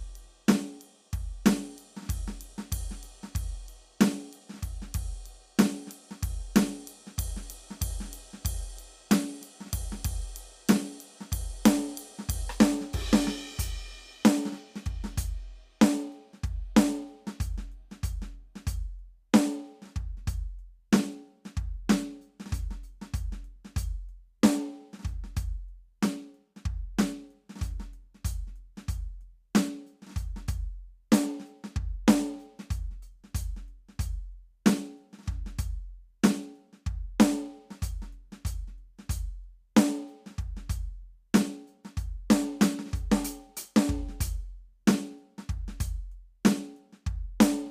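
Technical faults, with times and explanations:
No technical faults can be heard anywhere in this music clip. There is nothing here that needs a time or an explanation.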